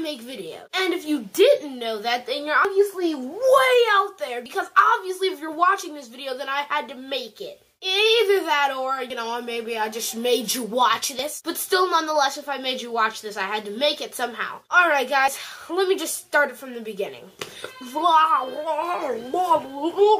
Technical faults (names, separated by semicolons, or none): dropped buffer (overrun)